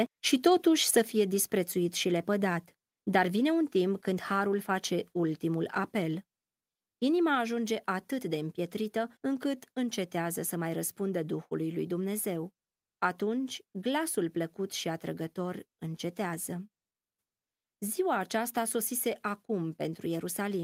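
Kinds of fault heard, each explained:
Microphone volume stepped down: at 1.02 s, between "și totuși să" and "fie disprețuit și lepădat", the speech and the background beneath it drop together by about 4 dB in one abrupt step and stay at the lower level. The likely cause is call software cutting the device's input volume after judging the microphone too hot. On a waveform the envelope shrinks instantly; on a spectrogram all bands, noise floor included, dim at once without a fade.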